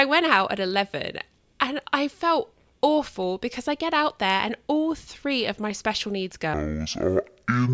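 At 6.54 s, right after "of my special needs", the speech drops into a wrong sample rate fault that lasts to the end at 7.74 s. The samples are being clocked out at half the rate they were captured at, with no conversion, which fits 32 kHz material played at 16 kHz. Speed and pitch fall together: the speech runs at 0.5x and sits a full octave (12 semitones) lower, sounding slow, deep and dragged.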